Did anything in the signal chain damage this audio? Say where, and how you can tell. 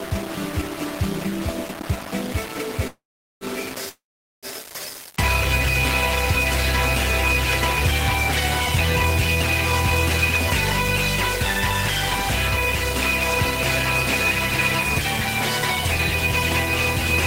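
Yes. Throughout the whole clip the audio is grainy, with distortion that tracks the signal and sits only roughly 15 dB below it. Quiet passages break up coarsely. This is likely low bit depth without dither at the sample-format conversion stage: rounding to about 4 bits, so the error follows the waveform.

Two call audio freezes occur, at 2.87–3.44 s and 3.89–4.46 s. Each starts with a brief fading continuation, then goes silent for about 0.41 s and 0.43 s. The sound then resumes where it stopped, with nothing lost but 0.54 s added each time. That points to network packets likely held up until the jitter buffer ran dry.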